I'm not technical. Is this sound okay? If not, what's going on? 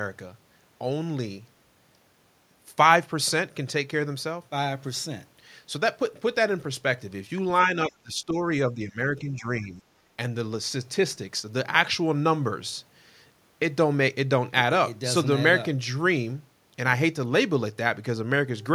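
No. There's speech suppressed in double talk between 7.89 and 8.36 s, again from 8.72 to 8.99 s, and from 9.19 to 9.84 s. In those stretches the voice dips down, sharply in the first and more mildly in the later two. This is most likely the echo canceller turning the voice down because it mistook it for echo from the loudspeaker while the other side was also talking.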